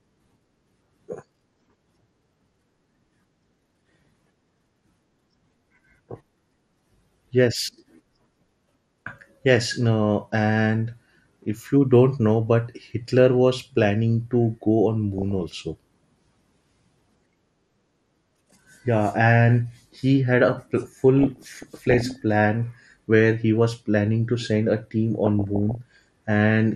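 From the start the speech sounds dull and gurgling, with upper bands dropping in and out and a granular edge on what remains. That steady texture is MP2 compression, the sub-bands being starved of bits, likely from a low rate near 80 kbps.

Layered over this are four short bursts of DAB burbling, at 3.65–4.49 s, 15.18–15.60 s, 21.19–22.16 s just before "plan where he was", and 25.24–25.96 s just after "to send a team". Bit errors of under one percent slip past error correction and corrupt sub-band samples and scale factors, so single bands jump in level frame by frame. The result is bubbling, squelching chirps that come and go, unlike the constant dullness underneath.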